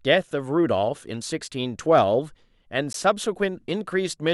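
At 2.93 s a hard-edged hole of silence, about 15 ms long, briefly cuts the speech: a gap between stream segments, where mismatched timestamps left a space the player filled with silence.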